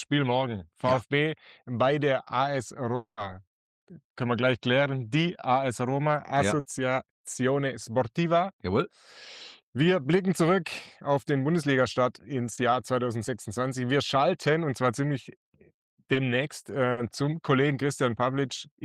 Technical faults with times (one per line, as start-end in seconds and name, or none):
2.95-3.19 long network dropout
6.59-6.67 burst of packet loss
12.55-12.59 short concealed packet loss
16.13-16.17 short concealed packet loss
16.91-16.99 burst of packet loss